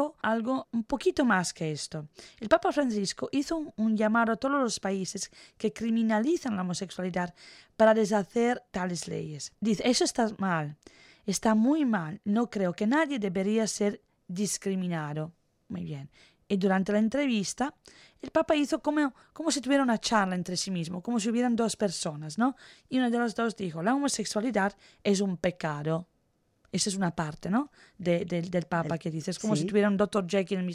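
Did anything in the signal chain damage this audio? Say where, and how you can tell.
No, nothing audible in this speech recording points to damage at any stage of the signal chain, with level, continuity and timing holding steady throughout.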